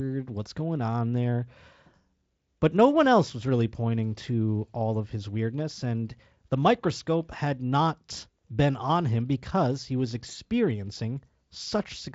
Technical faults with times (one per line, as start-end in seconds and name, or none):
none